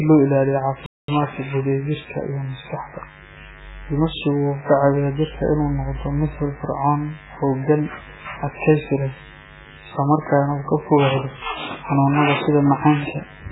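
A speech recording with three audible faults. A steady, raspy mains buzz based on 50 Hz runs through the whole clip, sitting roughly 25 dB below the speech. Its harmonics climb well into the kilohertz range, which points to sharp switching spikes from a dimmer or rectifier, or a missing shield, coupling into the signal path. The audio also has a watery, swirly texture, smeared consonant attacks and weak components flickering in and out. This is most likely heavy MP3 compression, and the damage fits a very low bitrate of around 8 kbps, where the encoder drops detail it cannot afford. At 0.86 s, just after "loo ilaaliyo", playback stops dead for about 220 ms and resumes at 1.08 s. This is a playback stall, likely caused by the player running out of data or being blocked until it recovered.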